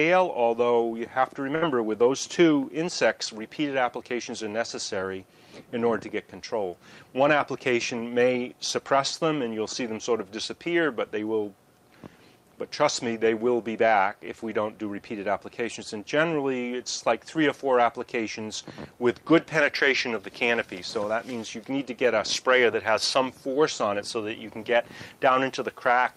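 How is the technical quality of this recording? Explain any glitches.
There is one glitch: a burst of packet loss from about 1.55 to 1.64 s. A run of packets was lost or arrived too late to play, so the receiver concealed the hole by extending the last sound it had and fading it down, filling about 63 ms. The audio then resumes with about 60 ms of the original missing, so the held, decaying tail gives way to a small jump forward in the material.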